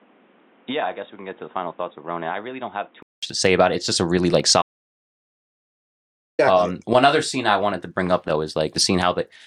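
Speech that sounds dull and boxy from 0 to 3.23 s, with nothing above 3.8 kHz, about 10 dB quieter, and its own background noise. A 200 ms gap then separates it from the fuller sound before "to say about it." That pattern likely means the input switched to a poorer device, not an EQ change. After "just a really like", an audio dropout to silence runs from 4.62 to 6.39 s (1.77 s). It is silent with no room tone, unlike a natural pause.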